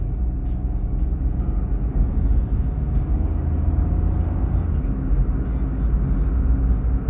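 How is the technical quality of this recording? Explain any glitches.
No technical faults are audible anywhere in this recording.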